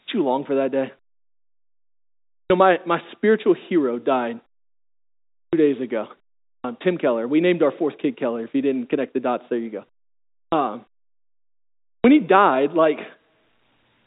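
Clipped start after a pause at 2.42, 5.44 (before "days ago"), 6.55 (after "days ago"), 10.44 and 11.96 s (before "when he died"). The output device sleeps through each silence and wakes late, swallowing 80 to 92 ms, so speech bursts abruptly in without its opening sounds.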